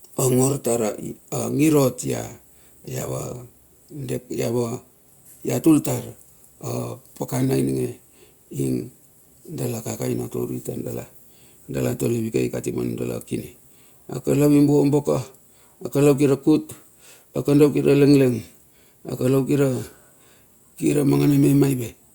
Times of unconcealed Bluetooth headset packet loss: none

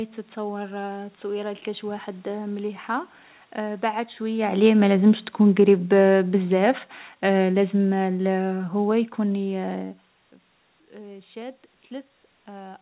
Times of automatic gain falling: 4.20-9.70

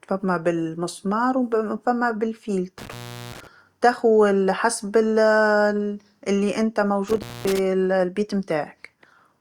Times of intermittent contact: 2.79-3.47, 7.08-7.59

